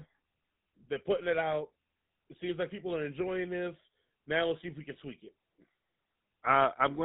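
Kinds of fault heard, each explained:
GSM full-rate codec: This early mobile-phone codec models the vocal tract and feeds it a sparse, regularly spaced pulse excitation. Only every third excitation sample survives. The damage is plainly audible across the whole speech clip. Everything above 4 kHz is gone, so the sound is narrow and boxy. A buzzy, gravelly roughness coats the voice. The character fits the 13 kbps full-rate mode.
Lost GSM frames: When a frame arrives damaged, the decoder reuses the last good frame's settings. Here the gap runs from about 0.64 to 0.66 s, just before "they're putting it out". It lasts about 20 ms, which points to a single lost frame. The repeat is too short to fade to silence. It leaves a brief, rough, metallic ring where the speech should continue.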